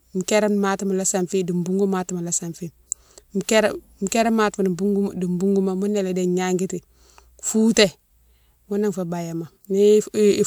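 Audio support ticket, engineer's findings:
No audible faults found on this speech recording.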